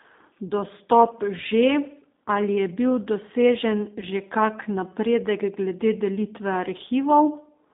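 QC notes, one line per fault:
throughout, G.729 codec: The speech has been squeezed through a low-rate CELP codec that fits 8 kbit/s G.729A, which discards the waveform and resynthesises each 10 ms frame from a vocal-tract filter, a pitch predictor and a handful of pulses. The line passes only about 200 Hz to 3.7 kHz, so the voice sounds thin and boxy, and the damage is plainly audible as a rough, slightly synthetic texture.
0.47 to 0.53 s and 4.00 to 4.04 s, VoIP packet loss concealed by the speech codec: Audio went missing, about 40 ms in the first gap (which fits two lost 20 ms packets) and 20 ms in the second (one packet). The decoder filled each gap by repeating its last pitch and filter settings at falling gain, so the sound smears into a buzzy tone or coloured noise that fades. Because each frame builds on the one before, the voice stays weak or distorted just after each gap.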